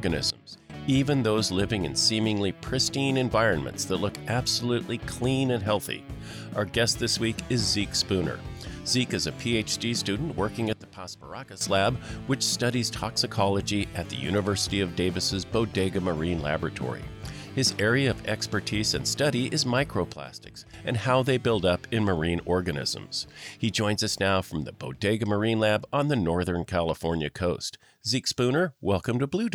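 At 0.30 s the level drops abruptly by about 17 dB and jumps back at 0.70 s. The same sudden gain jump recurs from 10.73 to 11.61 s (about 13 dB down) and from 20.13 to 20.74 s (about 10 dB down). Sound and background noise fall and recover together, likely from a gain change applied without a ramp. The waveform shows a hard-edged step in envelope, and the spectrogram darkens uniformly across all frequencies.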